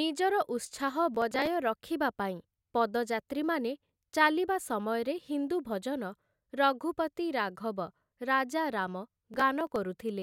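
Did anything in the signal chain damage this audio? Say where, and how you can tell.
Yes, processor overload crackle at the driver/buffer stage, 1.15–1.47 s and 9.09–9.76 s after "ରାଘବ ରାଜା ରାମ'": skipped buffers of roughly 3 ms leave waveform gaps and vertical broadband spectrogram streaks.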